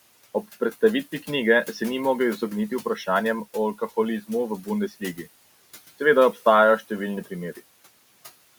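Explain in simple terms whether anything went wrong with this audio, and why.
Two things went wrong here, both caused by the noise suppressor.

First, there are noise suppressor artifacts all the way through. The suppressor keeps pushing down the parts of the sound it thinks are steady room hiss, and it does this in small slices of time. The room noise drops away sharply in the gaps and then creeps back in under the talking, so the background seems to pump up and down. The leftover hiss can also get a fluttery, warbly quality instead of sounding like a plain, even noise.

Second, there's speech cut by the noise suppressor between about 4.89 and 5.27 seconds. For a brief stretch, adding up to roughly a tenth of a second, the suppressor mistook some of the talking for background noise and turned it down along with the hiss. That's why something in that spot sounds swallowed or suddenly faint. 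The room noise itself is just part of the recording and sits well under the talking. The trouble comes from the suppressor's handling of it.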